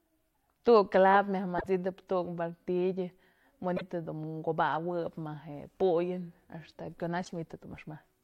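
Damaged data in a compressed stream makes the decoder lose frame sync three times, from 1.55 to 1.66 s (after "clavo myaj", before "tu'uk martillo"), 3.73 to 3.82 s and 7.21 to 7.32 s, each a brief disturbance.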